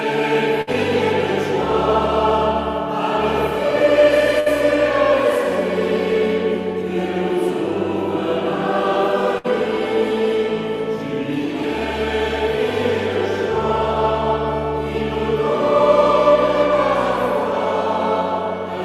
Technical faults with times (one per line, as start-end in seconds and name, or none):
0.61-0.70 burst of packet loss
4.40-4.49 burst of packet loss
9.38-9.47 burst of packet loss